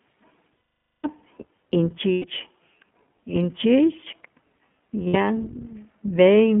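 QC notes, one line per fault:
throughout: iLBC codec. The speech sits in a narrow telephone band of about 150 Hz to 3.4 kHz, with nothing above that. Plainly audible codec damage gives it a rough, slightly synthetic edge, because each short frame's excitation is coded on its own instead of being carried forward from the previous frame. The sound fits the 15.2 kbps mode with 20 ms frames.
0.72–1.06 s, 2.12–2.25 s and 5.08–5.16 s: lost iLBC frames. In each gap the voice turns into a held, faintly buzzy, breathy vowel. The decoder fills the gap by repeating the last pitch cycle mixed with noise. The first and longest gap fades as it goes on, and the sound points to several hundred milliseconds of missing audio. Because each frame decodes on its own, the speech snaps back to normal right after each gap.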